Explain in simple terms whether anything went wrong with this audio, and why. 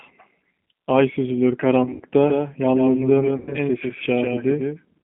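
Several things went wrong, and all of them can be heard.

The whole clip passed through the G.729 codec, a phone-call compressor that squeezes speech into very little data. It rebuilds the voice from a rough model instead of sending the real sound. Everything above about 3.6 kHz and below about 200 Hz is gone, so the speech sounds thin and boxed-in. The damage is plain: a rough, slightly synthetic edge runs through the entire recording.

There are two moments of VoIP packet loss concealed by the speech codec. Chunks of the call never arrived, and the decoder filled the gaps by guessing from the last sound it had. The first is from 1.84 to 2.01 s. About a tenth of a second is missing, scattered in pieces, with the longest gap lasting 80 ms. The second is from 3.37 to 3.56 s, again about a tenth of a second lost. Each gap turns into a brief buzzy or smeared sound that fades. The voice stays shaky for a moment afterwards.

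From 2.27 s to the end there is a doubled audio track. A second copy of the same sound plays roughly 150 ms behind the first, a little quieter. It sounds like a hard, dry echo with no room to it, and it switches on suddenly. The likely cause is the audio being picked up a second time by a slower path.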